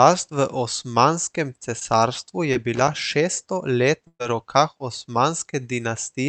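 Short concealed packet loss at 1.79–1.83 s and 2.53–2.57 s: about 20 ms of audio went missing each time, so the receiver extended the preceding sound, leaving a brief smear before blending back.

Loose connector crackle from 2.75 to 2.88 s: an unreliable contact repeatedly broke and remade the signal, producing an irregular burst of scratchy crackle.

Burst of packet loss from 4.07 to 4.21 s: about 120 ms went missing. The concealment held the last sound as it faded, dropped into a short silence, and then picked up further along. Throughout, the Opus call path's 8 kHz bandwidth ceiling limits the top end.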